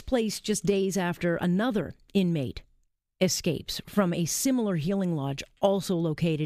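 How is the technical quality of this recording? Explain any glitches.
No technical glitches can be heard anywhere in this speech recording. There is nothing in the audio that calls for an explanation.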